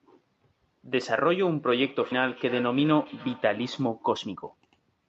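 Feedback echo between two devices runs from 1.67 to 3.91 s. A second device in the room replays this speech, and the microphone picks it up again. The local echo canceller ignores sound it didn't play itself, so each syllable returns roughly every 300 ms, thin and ringing, peaking about 19 dB below the speech.

A skip ahead comes at 2.11 s. With later audio already queued, around a second of speech was dropped, and playback jumps forward with no fill at all. The two sides of the cut are joined almost directly, giving an abrupt leap.

Jitter buffer speed-up follows from 2.21 to 3.05 s at 108% speed, and again from 4.15 to 4.89 s at 115%. The buffer held more audio than it aims for, so it trimmed short pitch-period slices, about 70 ms and 100 ms in total. The speech sounds hurried at unchanged pitch.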